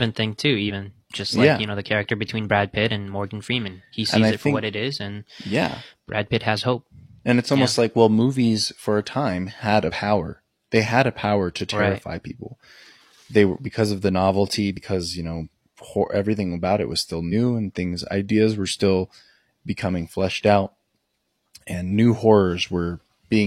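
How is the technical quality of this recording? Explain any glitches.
Five short glitches break up this speech, all from damaged data in a compressed stream: at 0.65 to 0.71 s (after "thing too", before "just like yeah you"), 9.85 to 9.91 s (after "for a time had"), 14.73 to 14.77 s (after "because of the novelty"), 17.28 to 17.32 s and 21.69 to 21.74 s, each about 40 to 60 ms. Corrupted bytes make the decoder misread frames, lose sync and hunt for the next frame header. This produces a brief chirp, squawk, click or gap, set apart from an ordinary click or dropout by the decoder's resynchronising at a frame boundary.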